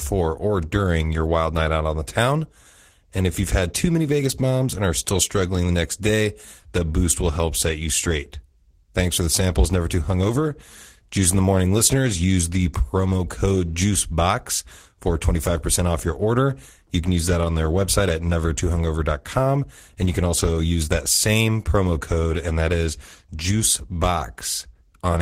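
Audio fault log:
No faults are heard anywhere in the speech.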